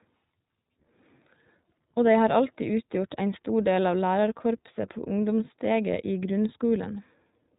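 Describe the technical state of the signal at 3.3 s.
At 3.3 s you're hearing iLBC codec damage, which runs through the whole clip: the speech is band-limited below 4 kHz and sounds noticeably rough and synthetic, fitting independently coded 20 ms frames at around 15.2 kbps.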